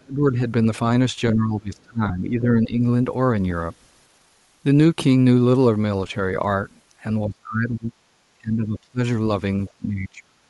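Through the whole clip the speech has a grainy, breathy upper edge, which points to Bluetooth LC3 compression. The coarse texture fits a transform codec running short 7.5 ms frames at around 48 kbps. At that rate the encoder keeps too few bits for the top of the spectrum. It fills the gaps with noise. The codec damage is plainly audible.

From 0.0 to 0.38 s the speech is pushed far down, by about 35 dB at its deepest. This is speech suppressed in double talk. The likely cause is an echo canceller that heard both sides at once and could not tell its own talker from the loudspeaker echo, so it ducked the whole signal. A longer, milder dip of about 15 dB runs from 1.33 to 2.78 s.

Inside that dip, from 2.08 to 2.11 s, there is a brief noisy smear of about 15 ms. These are lost LE Audio frames. The gap fits two missing 7.5 ms frames. The decoder rebuilt them by repeating the last spectrum with scrambled phase, so the sound turns hazy instead of going silent.

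Later the double-talk suppression returns three times. It pulls the speech down by about 25 dB from 7.26 to 7.99 s, about 20 dB from 8.41 to 9.0 s, and about 30 dB from 9.77 to 10.41 s. In each span the speech sinks, then recovers.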